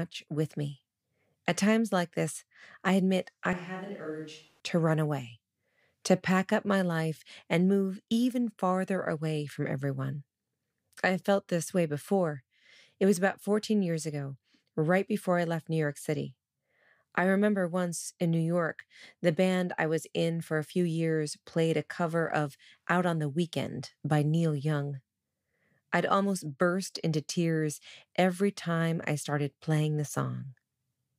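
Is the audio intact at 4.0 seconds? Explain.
No. From 3.53 to 4.60 s, between "this I admit I" and "to run away", the speech abruptly turns roomy and hollow, thin in the bass, roughly 10 dB quieter, with room noise rising to around 30 dB below the speech. Both the drop and the return are sudden. This is a switch to a distant microphone: the close microphone's signal most likely dropped out, leaving a farther pickup that hears more room and less voice.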